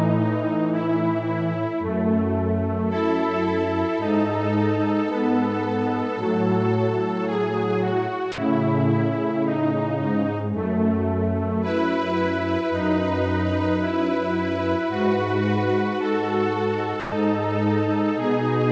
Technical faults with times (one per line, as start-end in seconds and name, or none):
8.32-8.38 sound dropped by the voice detector
17.00-17.12 sound dropped by the voice detector